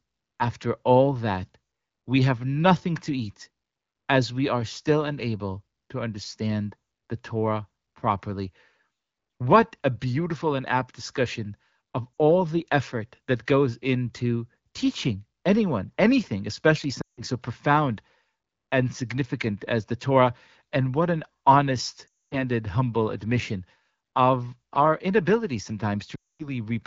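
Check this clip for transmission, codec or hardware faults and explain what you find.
Four dropouts from lost AMR speech frames occur in this speech clip, carried over AMR wideband (HD Voice) at a clear-sounding rate.

Lost AMR speech frames at 12.20 s (about 40 ms), 17.01–17.22 s after "teaching anyone anything especially", 22.07–22.36 s after "what an honest", and 26.15–26.49 s after "admission of our inability". Corrupted frames fail their check, so the decoder repeats the last good pitch and spectral shape at falling gain. The short one is a brief dip toward silence. The longer ones drop to near silence within two frames, and speech resumes weakly at "so profound" and "humble admission of our".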